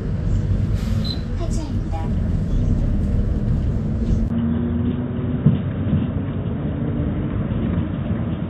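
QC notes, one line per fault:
Throughout: Vorbis compression, likely at a low bitrate near 27 kbps. Nothing passes above 14.1 kHz, and the coarsely quantised treble turns to grainy hiss that roughens tones and softens attacks. On a spectrogram the band cuts off flat, with speckled, patchy high-frequency energy.
4.28 to 8.50 s: input switched to a poorer device, likely a second microphone or headset path. After a 20 ms gap the sound goes dull and boxy with nothing above 3.8 kHz, about 5 dB quieter, over a faint new noise floor. The waveform dips and shows a short gap, while the spectrogram's upper band abruptly empties.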